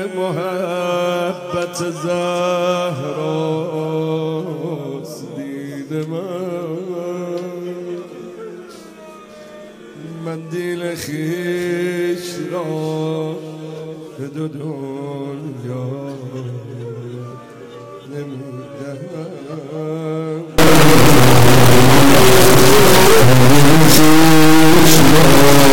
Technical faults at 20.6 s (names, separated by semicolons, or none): integer read as float